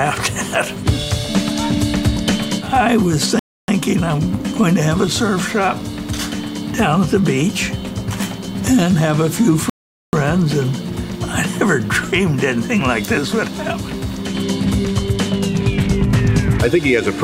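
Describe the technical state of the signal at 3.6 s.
A rebuffering stall runs from 3.39 to 3.68 s: the player exhausted its downloaded audio, fell silent for 290 ms, then resumed exactly where it stopped.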